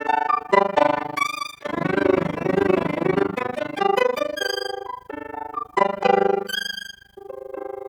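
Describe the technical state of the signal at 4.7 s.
At 4.7 s the music is caught in overlap-add ripple, which runs through the entire clip rather than appearing as a local event. The signal was split into windowed frames and rebuilt with an overlap that fails to sum to constant gain, so the level dips by about 60 dB once per frame, around 30 times a second. The result is a harsh, fast flutter. Unlike a deliberate tremolo, its rate stays locked to the frame grid regardless of tempo.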